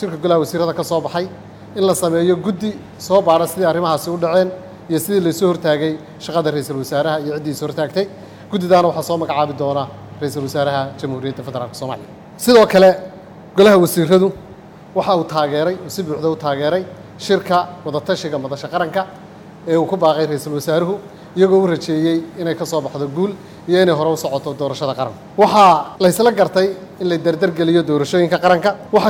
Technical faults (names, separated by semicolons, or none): none